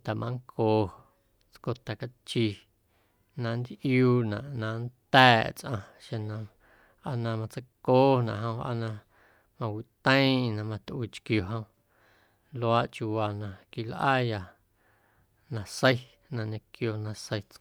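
No technical faults can be heard anywhere in the recording. There is nothing in the speech signal that calls for a timestamp or an explanation.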